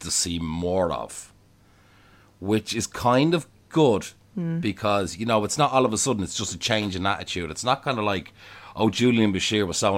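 No technical faults can be heard anywhere in the speech recording, which comes through as a continuous, intact signal.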